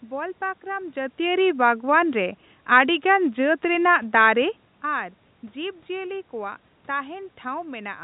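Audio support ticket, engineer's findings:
Findings: no system fault heard in this recording.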